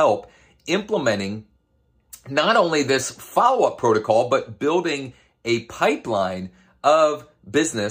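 A speech recording with nothing technically wrong to be heard in it. No dropouts, distortion or timing problems turn up anywhere in the audio.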